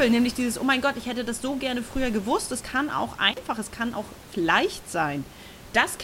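A speech recording with an intermittent contact fault from 3.31 to 3.39 s, after "gewusst es kann auch" and before "es kann auch leicht". A loose cable or plug opens for about 33 ms, so the signal cuts out with crackle at each edge and only faint hiss remains during the gap. The room noise underneath, about 19 dB below the speech, belongs to the recording space.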